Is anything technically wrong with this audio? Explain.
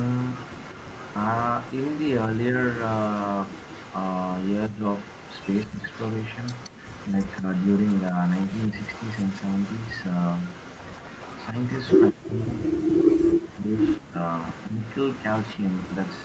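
Yes. There are two faults.

From 0.00 to 12.37 s, and again from 13.72 s to the end, there is an echo leak. A faint, delayed copy of the speech trails the original by about 176 ms. It sits roughly 20 dB below the main speech. The likely cause is a far end playing the call on a loudspeaker. Its echo canceller failed to remove everything its microphone picked up and sent the remainder back. The copy comes back just behind the speech.

There is also speech suppressed in double talk, at 2.28–2.57 s, 4.68–4.83 s, 5.66–5.83 s, 7.09–7.49 s, 8.70–8.77 s and 12.11–14.80 s. Each time, the speech dips in level. The first five dips are short. Some are slight, and others drop sharply. The last is different. It lasts about two seconds and nearly silences the speech. This likely happens because both sides talked at once. The echo canceller could not separate the talker from the returning echo, so it turned both down.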